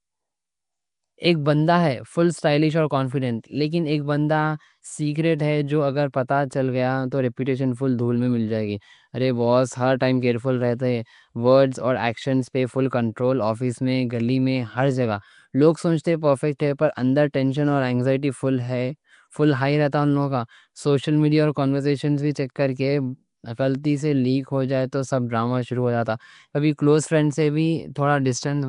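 Across the whole speech clip there is a rough, hissy halo and a smeared, underwater quality, with nothing above 10.6 kHz. That points to Nellymoser compression, likely Nellymoser Asao at around 44 kbps. Unlike ordinary broadband hiss, the noise fills quiet bands block by block and moves with the sound.

At 16.59 s, between "لوگ سمجھتے" and "ہے پر اندر ٹینشن", there is pre-echo. A sharp attack falls late in a coding block, so the quantisation noise meant for the loud part spills back about 11 ms, leaving a brief hiss before the onset and a softened attack. A click would instead come without that smeared lead-in.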